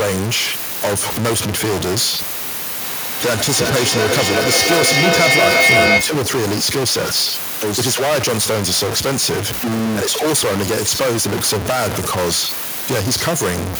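A stuck bit runs through the whole recording, from the first second to the end. The speech carries a distortion that follows the waveform, and the pauses between phrases are not silent but filled with noise. That pattern most likely comes from one data bit held at a fixed value by a broken line or converter, so roughly half the samples land off by that bit's weight.

A feedback howl builds from 2.8 s to 6.33 s. The sound is picked up, played out through a loudspeaker in the same room and captured again, gaining level on each trip. Rather than dying away, the repeats pile up about every 300 ms, the loop's delay, and narrow to a tone around 2 kHz that peaks about 4 dB above the speech before the loop is broken.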